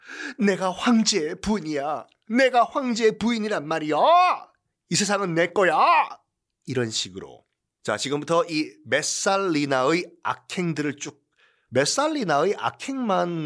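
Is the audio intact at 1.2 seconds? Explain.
Yes, the speech at 1.2 seconds plays through intact, with no dropout, click, distortion or other fault at that point.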